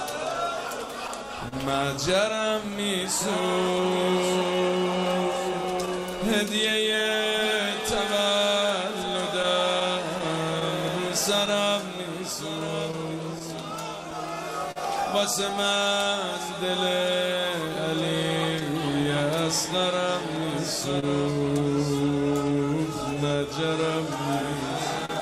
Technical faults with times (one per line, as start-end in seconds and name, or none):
0.00-25.21 clock drift between sender and receiver
1.48-1.54 short stall from a late packet
2.16-23.38 repeated timing corrections
5.86-14.78 scattered short gaps
17.76-19.07 scattered short gaps
21.00-21.04 short stall from a late packet
25.05-25.11 short stall from a late packet